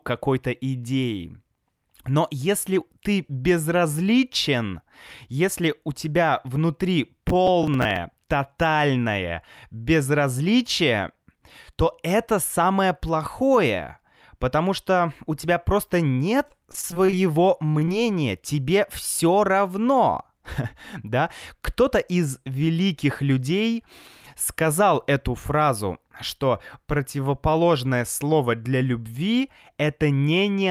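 From 7.30 to 7.96 s, right after "если у тебя внутри", there's processor overload crackle. Around ten buffers of roughly 10 ms miss their deadlines and replay stale audio, so you get a gritty tearing.

Then from 16.37 to 17.89 s, after "что у тебя просто", repeated packet loss kicks in. Over a dozen short holes, the longest 21 ms, get patched by extending the last sound, which comes out choppy and robotic.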